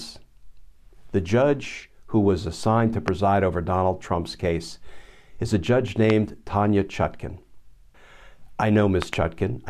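Speech carrying four loud pops, sharp thumps roughly 20 dB above the voice at 3.08 s after "who was assigned to" and at 6.10 s after "case is a judge", then a double pop from 9.02 to 9.15 s. Each pop is likely a voltage spike from a plug, switch or static discharge. On a waveform they appear as tall, narrow spikes, and on a spectrogram as thin vertical lines spanning all frequencies.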